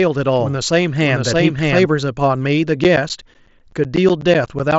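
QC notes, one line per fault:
0.00–1.86 s, doubled audio track: a second full-band copy trails roughly 0.7 s behind at about equal level, already running at the start. Likely a second, slower capture path.
2.84–4.72 s, periodic USB or driver dropouts: regular ticks every 0.125 s, each about 10 ms of audio replaced by silence as the bus or driver stalls.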